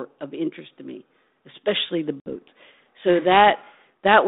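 At 2.2 s there's packet loss on the ADPCM call: a hard-edged gap, about 60 ms of silence, running to 2.28 s. The decoder's predictor and step size lose track of the sender's, so the speech comes back with some distortion before settling.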